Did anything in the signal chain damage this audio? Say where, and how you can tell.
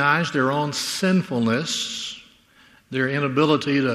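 No, nothing in the chain has damaged this audio.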